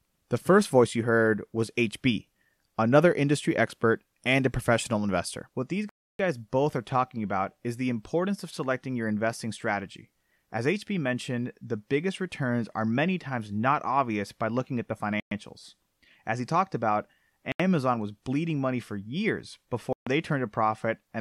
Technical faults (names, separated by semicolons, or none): Bluetooth stall